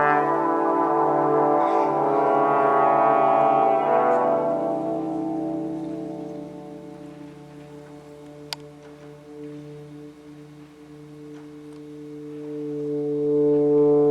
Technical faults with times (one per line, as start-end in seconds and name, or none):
none